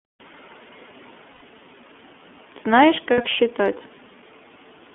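Throughout, the speech carries plainly audible iLBC codec damage: band-limited to roughly 200 Hz–3.4 kHz, slightly rough and synthetic, consistent with independently coded 30 ms frames. At 1.32 s (90 ms) and 3.12 s (60 ms), lost iLBC frames are concealed by a repeated, slightly buzzy pitch cycle, with clean recovery immediately after.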